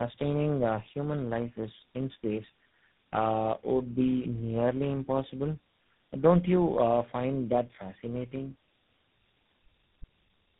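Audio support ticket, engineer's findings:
Tandem speech coding, whole clip. Rough, muffled, warbly speech, worse than any single coder. Sound points to three speech codecs in series, ending likely on GSM full rate. Each re-encodes the previous decoder's output, so errors stack. Spectrogram: nothing above 3.8 kHz, smeared formants, blotchy harmonics. Waveform: grainy, uneven envelope.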